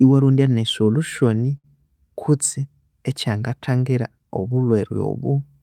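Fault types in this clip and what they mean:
Short stall from a late packet: from 1.57 to 1.66 s, just before "kutse ekyangathangira", a sound is held too long with a slight buzz or dip. A late packet emptied the jitter buffer, so 63 ms was stretched in. Nothing is lost, but the rest arrives 63 ms later.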